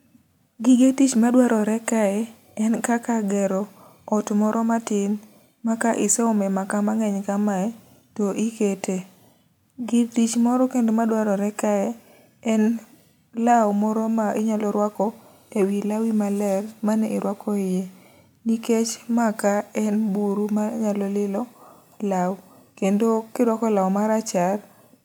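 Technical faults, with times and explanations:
No technical faults can be heard in this speech recording. There is nothing here that calls for a time or an explanation.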